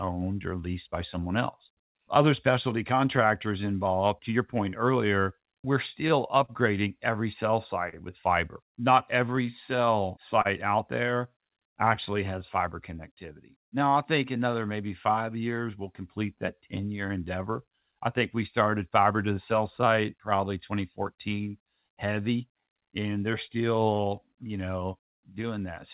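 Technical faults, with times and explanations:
Throughout: clock drift between sender and receiver. The sender's clock runs about 3 percent slow against the receiver's, so the jitter buffer keeps draining. The receiver must stretch the speech to avoid running dry, which leaves small uneven timing hiccups across the clip.
0.05 to 25.56 s: repeated timing corrections. To keep pace with the slow sender, the receiver repeatedly lengthens short pieces, adding roughly half a second in all at about 98 percent speed. This comes across as a slightly dragging, unsteady tempo with occasional faint stutters.
5.74 to 11.98 s: scattered short gaps. About seven packets arrived late or went missing, each gap under roughly 40 ms, around 150 ms in total. The receiver covered each hole by extending the preceding sound, which leaves brief smears and ticks in the speech. The call path's G.711 mu-law coding cuts everything above 4 kHz.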